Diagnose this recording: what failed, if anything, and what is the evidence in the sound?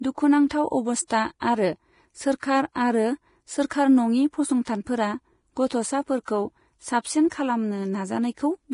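The codec stage failed throughout. The speech is hissy and grainy, with roughened tones and blurred consonant attacks. Nothing sounds above 10.5 kHz. The likely cause is heavy Vorbis compression, near 30 kbps. The treble is quantised so coarsely that its detail turns into noise.

Pre-echo appears at 6.25 s, again a codec fault. A short hiss, about 30 ms long, runs just before a sharp attack. The attack itself sounds smeared. The transform spread noise sized for the loud onset across its whole block, including the quiet moment before it.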